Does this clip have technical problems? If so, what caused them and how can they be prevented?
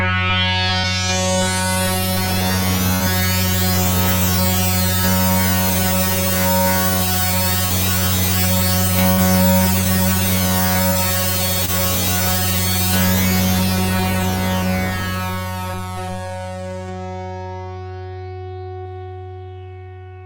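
Yes. Short concealed packet loss occurs at 0.79–0.86, 2.96–3.02, 7.66–7.72, 9.81–9.84, 10.89–10.93 and 11.66–11.70 s. Each time, 20–40 ms of audio never arrived and the receiver extended the preceding sound, heard as a brief smear or wobble. A spectrogram shows momentarily frozen, repeated texture; the waveform shows a copied-looking cycle. Forward error correction or a slightly deeper jitter buffer would prevent these.

A burst of packet loss at 9.12–9.19 s drops about 60 ms. The receiver bridges it with roughly 54 ms of continued sound that fades away, then resumes further on with that stretch missing. The spectrogram shows a smeared, decaying block ending in an abrupt jump, and the waveform envelope sags before snapping back. A more stable network path with redundant packet transmission would prevent it.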